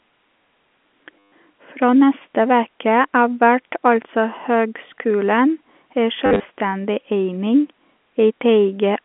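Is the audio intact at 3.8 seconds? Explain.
Yes, the speech at 3.8 seconds is intact, with nothing breaking or distorting it beyond the narrow band of the G.711 telephone coding it travels through.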